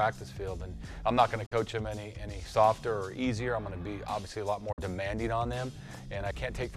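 Two short digital broadcast dropouts interrupt the sound, at 1.46 to 1.52 s and 4.72 to 4.79 s. Each time the receiver mutes after an 8 ms fade, losing about 48 ms, which fits two corrupted frames. On a spectrogram both appear as narrow blank vertical gaps, and on a waveform as flat silent stretches.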